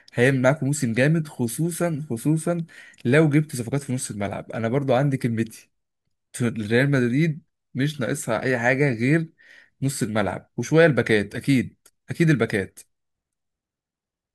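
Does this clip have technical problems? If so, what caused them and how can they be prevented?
No, nothing in this speech clip points to a technical fault, so there is no cause to trace and nothing to prevent.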